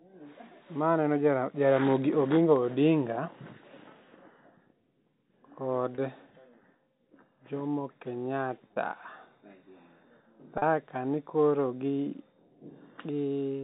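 A speech clip with packet loss with pitch repetition at 5.95–5.98 s, 8.68–8.76 s (scattered over about 80 ms), and 10.58–10.62 s just before "kani koro gi". Each loss, 30–40 ms in total, is bridged by looping the last pitch cycle, giving a brief buzzy hold. The waveform shows identical repeated cycles, and the spectrogram shows flat, frozen harmonic stripes, all beneath the 4 kHz ceiling of the telephone band.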